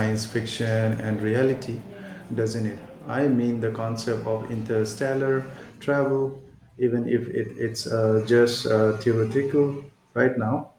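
Nothing goes wrong anywhere in this speech recording, so there's no technical fault to point out.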